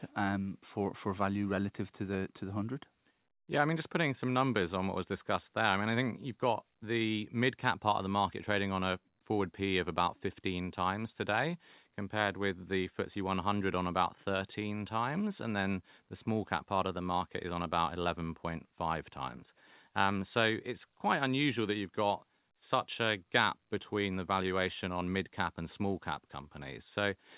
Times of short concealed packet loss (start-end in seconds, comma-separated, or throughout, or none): none